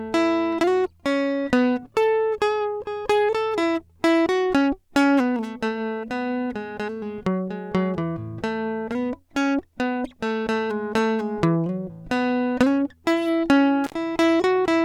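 At 13.84 s the music drops out in an intermittent contact fault: a loose connection opens for about 54 ms, with crackle at the break and the return around 13.94 s.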